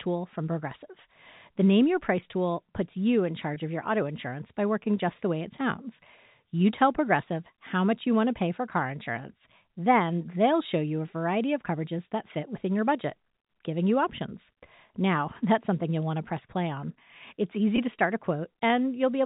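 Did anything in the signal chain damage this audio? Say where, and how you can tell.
Yes, network packet loss with pitch repetition at 3.54 s and 17.76 s: a brief buzzy hold, not a silent gap, which fits one lost 20 ms packet.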